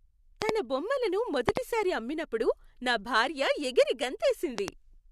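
A speech recording marred by three loud pops, each a pair of sharp thumps in quick succession, at 0.42 to 0.51 s, 1.49 to 1.59 s (just before "అమ్మినప్పుడు నా"), and 4.58 to 4.70 s, peaking about 20 to 25 dB above the speech. The speech runs on unbroken beneath them, which separates these from dropout clicks that cut the sound out. The likely cause is a voltage spike from a plug, switch or static discharge, shaped by the following circuitry.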